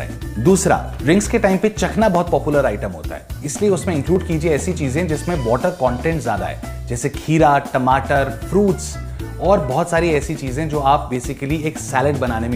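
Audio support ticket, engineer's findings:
Periodic USB or driver dropouts, 0.14–12.16 s: tick every 1.0 s, around half a millisecond skipped each time. USB bus or driver stalled on schedule; steady spacing rules out random clicks.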